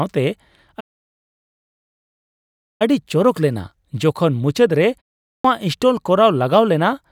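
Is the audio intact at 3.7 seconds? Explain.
Yes, at 3.7 seconds the speech is intact, with no fault at that moment.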